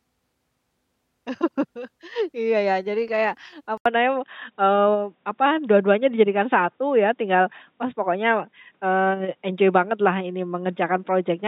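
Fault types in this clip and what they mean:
Input switched to a poorer device: right after "ya jadi kayak" there's an 80 ms gap, then the sound turns dull and boxy with nothing above 3.8 kHz, a small level shift and a faint new noise floor, likely a jump to another mic or headset.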